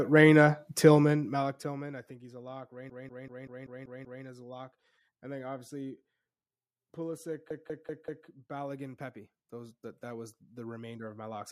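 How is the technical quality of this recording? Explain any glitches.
Two bursts of repeated frames make the speech stutter. From 2.90 to 4.24 s, right after "he's a lock", a 192 ms block plays seven extra times before "a lock and then", adding 1.34 s. Between 7.50 and 8.27 s a 192 ms block loops four more times, adding 0.77 s. In both cases the same run of compressed frames, which fits about six frames, got written again and again, so the decoder replays that slice each time.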